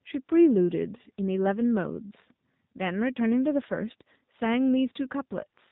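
From start to finish the speech sounds buzzy and synthetic, with a thin, boxy tone and nothing above 4 kHz. This is the AMR narrowband mobile codec. It rebuilds each 20 ms frame from a model of the vocal tract fed by a few pulses, rather than keeping the waveform itself. The damage is plainly audible, which fits a low mode near 7.4 kbps. The call microphone processing's bass trim sits underneath, unremarkable.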